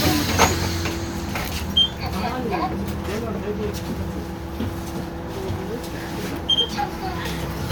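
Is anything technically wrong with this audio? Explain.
No technical faults are audible.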